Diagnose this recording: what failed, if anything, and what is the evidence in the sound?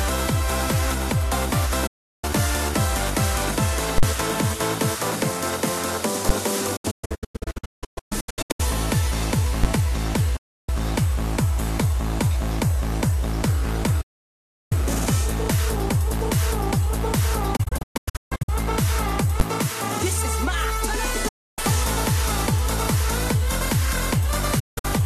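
Digital broadcast dropout at the reception stage. The sound fades out over about 8 ms and goes silent at 1.87–2.24, 10.36–10.69, 14.01–14.72 and 21.28–21.59 s. It breaks into several short holes across 6.76–8.60, 17.56–18.49 and 24.59–24.85 s. The receiver muted on bad frames, and unlike a network packet-loss glitch, the missing audio is never concealed or repeated.

Invalid numbers at full scale in a processing stage. There is a very loud pop at 3.98 s and another at 4.03 s with dead air between, which fits a 2048-sample block. Single bangs occur at 6.29, 9.64 and 19.40 s, each fitting a 512-sample block. A simple overload clip would instead follow the waveform.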